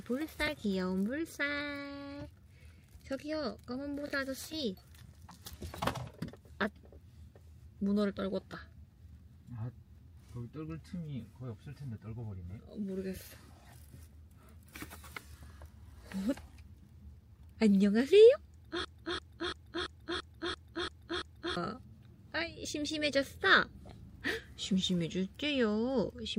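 A broken-record loop runs from 18.85 to 21.57 s. A fragment of about 339 ms plays eight times in a row, identical each time and joined back to back, so the audio stutters in place instead of moving forward. The likely cause is a stall in the player, encoder or stream that kept resending the last chunk it had buffered. Whatever should have been heard in those seconds never arrives and is lost.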